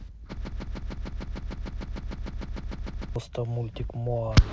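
From 0.45 s to 3.16 s the speech gets stuck on one short fragment of about 0.15 s, which repeats exactly and back to back 18 times, giving a stuttering, machine-like chatter instead of continuing. This is a broken-record loop, and the speech that should have filled those seconds is missing when the audio resumes. The likely cause is a player, encoder or stream that stalled and kept replaying the last fragment it held.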